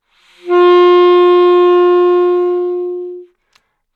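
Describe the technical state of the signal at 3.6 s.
At 3.6 s the signal is intact, with no fault present at that moment.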